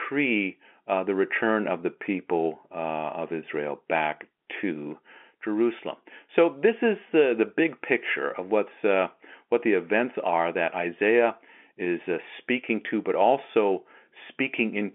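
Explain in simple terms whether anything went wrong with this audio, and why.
Nothing went wrong with this audio: it is speech heard through an ordinary telephone line, and nothing in it sounds out of place.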